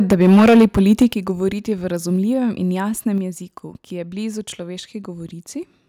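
From 0.11 to 1.05 s, the input gain was likely set so high that peaks ran about 10 dB past the converter's limit. This microphone overload shears the tops off roughly a tenth of the waveform, giving the loudest speech a harsh, crackling edge. At 0.13 s and again at 1.14 s, the microphone volume was stepped down, likely by call software reacting to the clipping. The speech and background drop together abruptly, first by about 2 dB, then by about 7 dB.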